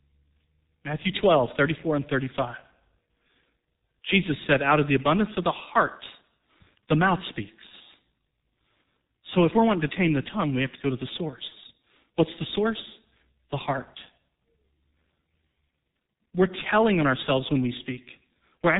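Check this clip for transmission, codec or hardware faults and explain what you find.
The speech carries one fault from start to finish: heavy G.723.1 codec damage. Throughout the clip, everything above 3.8 kHz is gone. The coarse 30 ms frames and slowly updated voice model, which fit a bitrate around 6 kbit/s, leave the speech muffled and hoarse with smeared consonants. A spectrogram shows a flat ceiling at 3.8 kHz, with blocky, frame-stepped smearing below it.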